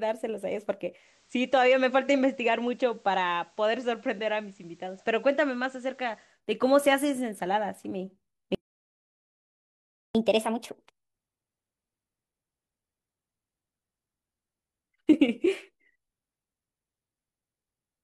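Digital radio blending to analogue, from 0.91 s to 6.41 s: the receiver lost its digital stream and cross-faded over about 189 ms to the FM broadcast of the same station. The level drops by about 3 dB, and a hiss appears, roughly 35 dB under the signal. At 6.41 s it fades back to the louder digital sound.

A playback stall runs from 8.55 s to 10.15 s. The speech stops mid-flow and the output goes completely silent for 1.6 s before sound resumes. The likely cause is the player running out of buffered data, or its audio thread being blocked, so nothing reached the output until it recovered. The gap is long enough to be clearly heard as a break in the delivery rather than a natural pause.

Catch-up at higher speed follows straight away, from 10.15 s to 13.15 s. To win back the time lost in the stall, the player resamples its backlog and plays it 1.15 times faster. Speed and pitch rise together, so the speech sounds hurried and about two semitones higher. 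At 13.15 s it drops back to normal rate and pitch.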